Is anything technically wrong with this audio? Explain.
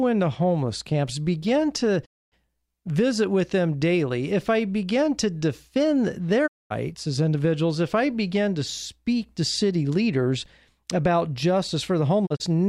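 Yes, there are digital broadcast dropouts. At 2.04–2.34 s, after "homeless camps begin to", and 6.46–6.72 s, after "I begin to defend", the receiver mutes for about a quarter second when corrupted frames fail, fading out in 20 ms. Near 12.25–12.48 s two holes up to 32 ms are scattered. Each appears as a blank vertical band on the spectrogram and a flat waveform gap.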